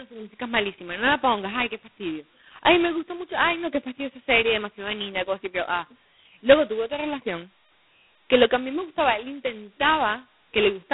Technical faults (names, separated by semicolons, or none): G.726 ADPCM